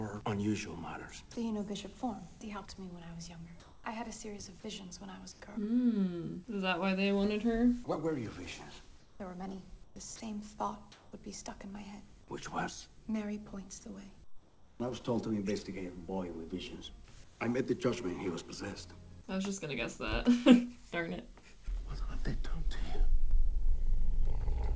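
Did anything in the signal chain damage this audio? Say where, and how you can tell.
Yes. Comfort noise in place of the background appears at 3.60–3.84, 5.32–5.40, 9.00–9.20, 9.84–9.96, 10.92–11.12, 14.24–14.80 and 17.24–17.40 s. In these gaps, where the background sits about 25 to 31 dB below the loudest passages, its detail is swapped for a flat, featureless hiss that shifts level by about −5 to +2 dB. This is likely call processing: discontinuous transmission stopped sending packets, and the receiver synthesised shaped noise until sound resumed.

A short piece of sound dropped by the voice detector occurs at 10.16–10.20 s. Roughly 40 ms of real sound vanishes and the same steady synthetic noise stands in for it, so the sound briefly gives way to hiss. This is likely the call-side detector misjudging a quiet moment as background and muting it before re-triggering. Through all of this the audio band stops at 8 kHz, which fits a wideband G.722 call codec.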